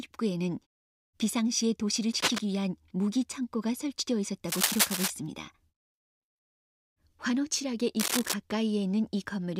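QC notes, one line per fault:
2.19–2.41 s, 4.45–5.10 s, 8.00–8.34 s: cable scratch noise. Dense, uneven bursts of scratching and rustling sit over the audio, roughly as loud as the sound itself. This likely comes from a worn cable or connector being moved, which makes its contact resistance flicker rapidly.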